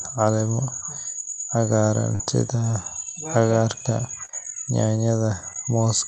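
At 2.15 to 2.21 s and again at 4.25 to 4.31 s, short concealed packet loss leaves about 40 ms of this speech missing, bridged by extrapolated sound. Each is heard as a brief smear or wobble and shows as a blurred, smoothed patch in harmonics beneath the call path's 8 kHz ceiling.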